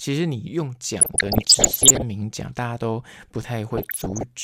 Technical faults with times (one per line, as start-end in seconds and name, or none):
1.01-2.02 DAB burbling
3.67-4.23 DAB burbling